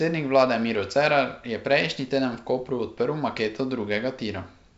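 No technical faults can be heard in the speech. It carries the sound of G.722 wideband telephone coding at 64 kbit/s, with the audio extending up to about 7 kHz and the coding leaving at most a faint trace in the upper band.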